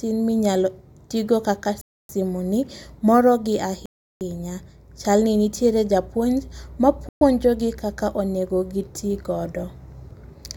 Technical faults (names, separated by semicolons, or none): Bluetooth stall